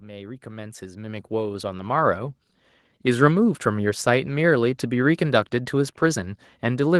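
The automatic gain control judged the incoming level too low and pushed its gain upward, a case of automatic gain rising. It starts at about 0.05 s and keeps climbing until 2.26 s, adding about 11 dB in all. Because the whole signal passes through that gain stage, the speech and the background noise swell together over those two seconds, so the opening sounds as if someone is slowly turning the volume up.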